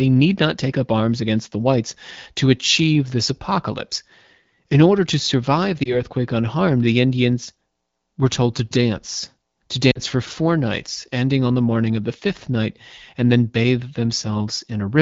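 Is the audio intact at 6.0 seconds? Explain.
No, not quite. At 6.0 s the audio is recovering from lost AMR speech frames between 5.83 and 5.99 s. The disturbance fits a single lost 20 ms frame whose checksum failed. The AMR-WB decoder filled the gap by repeating the last good pitch and vocal tract settings at reduced gain. The result is a brief dip or warble, and the voice comes back weak or rough for a moment.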